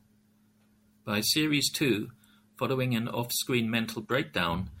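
No technical faults are audible.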